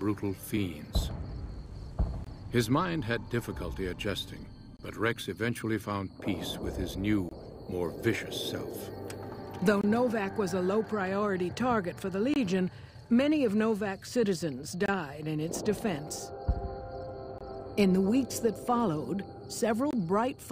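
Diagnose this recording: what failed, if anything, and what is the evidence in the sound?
A gap between chunks breaks the audio at playback or storage. The audio arrives in 2.5 s chunks, and silence of about 23 ms is inserted at each join without losing any sound. The holes fall at 2.24, 4.77, 7.29, 9.81, 12.34, 14.86, 17.38 and 19.91 s. On the waveform, each is a flat, silent run with vertical edges. On the spectrogram, each is a narrow, evenly spaced blank column.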